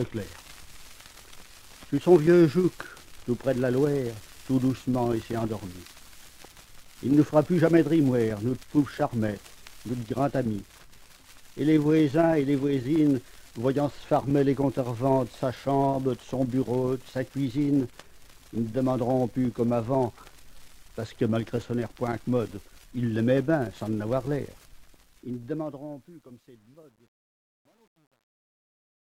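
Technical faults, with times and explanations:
24.70 to 29.17 s, truncation distortion on a fade. The fade-out toward the end turns grainy as the level drops. From about 25.71 s to the end it is at its worst. The fade stage keeps too few bits and adds no dither. The grit suggests about 10-bit resolution. Near the smallest step, the waveform collapses into a few square steps, so the quiet tail sounds gritty.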